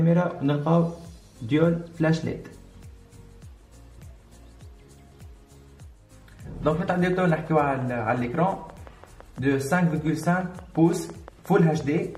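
From 6.96 s right through to 12.16 s there's a train of clicks, a steady ticking at about 5.8 per second, around thirty in all, roughly as loud as the sound itself. It's likely interference or a faulty connection injecting the same pulse repeatedly.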